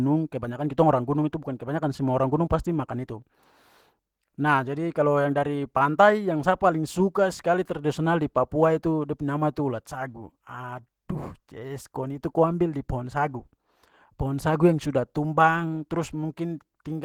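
Low-rate Opus compression, likely running in its hybrid speech mode at a rate around 16 kbps, affects this speech clip throughout. The starved encoder approximates the signal coarsely, so the voice carries a plainly audible hoarse, grainy roughness, although the band still extends to about 20.3 kHz.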